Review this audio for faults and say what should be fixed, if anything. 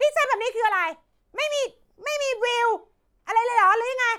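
Nothing stood out on listening, so there is nothing here that needs fixing.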